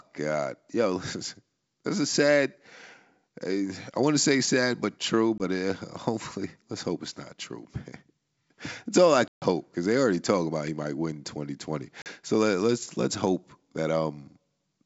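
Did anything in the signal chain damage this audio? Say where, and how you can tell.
Yes, at the network stage: packet loss on an ADPCM call. There are three hard-edged silent holes. The first is at 5.38 s, right after "say sad but true", lasting 20 ms. The second is at 9.28 s, between "all I" and "because they already talk", lasting 140 ms. The third is at 12.02 s, lasting 40 ms. Those lengths point to roughly one, seven and two lost packets. After each hole the decoder's predictor and step size no longer match the sender's, so the sound resumes off-level or with a click and some distortion, then settles within tens of milliseconds. The clear wideband G.722 band around the holes makes them easy to spot.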